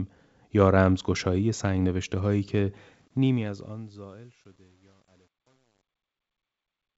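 From 2.79 s the speech fades out, and the fade shows truncation distortion: the gain stage kept too few bits, which fits about a 10-bit word, with no dither, so the waveform collapses into coarse steps. From 3.72 s to the end the tail sounds gritty. Unlike broadband hiss, this grit follows the signal and disappears with it.

Between 4.88 s and 4.90 s come bit errors on the ADPCM link. A small fraction of bits flipped across what points to a few frames, and each error throws off the decoder's step size and predictor, so the fault rings briefly as a pop and rough burst with a quick level jump. A plain click would end at once. This damage lingers for milliseconds. The G.722 wideband coding itself carries the speech with little or no added damage.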